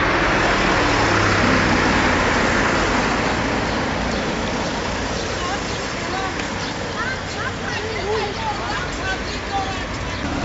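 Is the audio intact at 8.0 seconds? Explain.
Yes, the audio is intact at 8.0 seconds, with no dropout, click, distortion or other technical fault audible at that moment.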